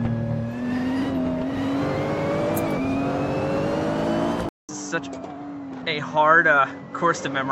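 Input switched to a poorer device at 4.49 s: after a 200 ms silence, the sound turns duller, cut off above 7.7 kHz, much quieter, with new background noise, likely a microphone change.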